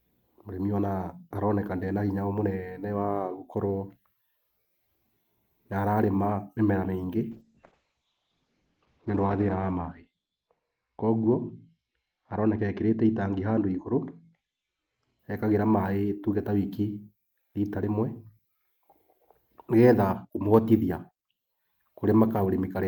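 From 7.33 to 15.25 s a call bitrate drop makes the speech rough and muffled above 8 kHz, consistent with about 32 falling to 8 kbps, without packet-loss gaps.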